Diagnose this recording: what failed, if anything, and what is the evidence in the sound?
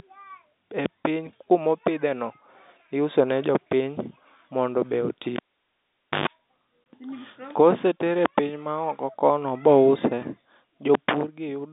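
Analogue wiring is the first culprit: a cable pulled and plugged in while live. Right after "mondo be oti" at 5.36 s there's a pop, then the line goes near-silent for about 0.87 s. As the plug goes back, roughly 130 ms of 50 Hz mains buzz comes through while only the tip is making contact, then a second pop at 6.28 s when the sleeve seats and the speech returns.

Shortly after that, there's packet loss filled with silence at the network stage. A hole from 6.84 to 6.86 s cuts the speech for 20 ms, with hard edges at each end. That length fits a single dropped packet at a 20 ms frame size. The receiver had nothing to play there and inserted silence instead of concealing the gap. The narrow telephone band, roughly 200 Hz to 3.7 kHz from the G.711 A-law path, sits under both events.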